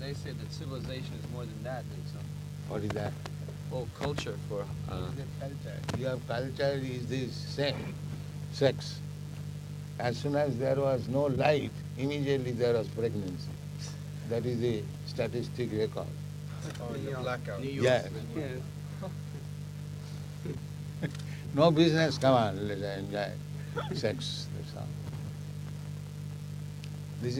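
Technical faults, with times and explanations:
No technical faults detected.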